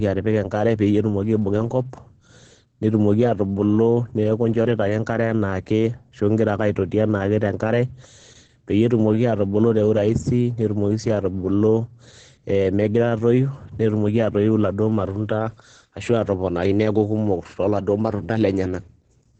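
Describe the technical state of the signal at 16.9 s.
At 16.9 s you're hearing the same Opus voice compression that runs through the whole speech clip. It's the SILK linear-prediction coder working hard at a very low rate. The damage sounds like roughly 10 kbps. Nothing gets through above about 9.4 kHz, so the top end is dull. The coarsely coded excitation makes the voice hoarse, muffled and a bit robotic. The artefacts are heavy right there, as they are everywhere else.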